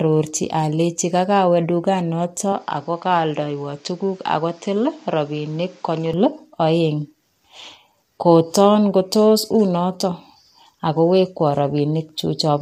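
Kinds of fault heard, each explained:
Low-delay AAC compression: The speech is grainy and rough across the whole clip, with a hiss sitting between the harmonics and a top band that sounds thin and partly synthetic. This points to a low-delay codec, likely AAC-ELD, at a low bitrate such as 32 kbps. Its short frames cannot separate pitch harmonics cleanly, and at this low bitrate the bits run short. The damage is plainly audible from start to finish.
Input switched to a poorer device: From 2.52 s to 6.14 s the sound turns duller, then clears again. Nothing comes through above about 7.6 kHz in that stretch. The level drops by roughly 5 dB, and a new noise floor appears, some 35 dB below the speech. There is no gap at either switch. This likely comes from the input moving to another microphone or a headset and back.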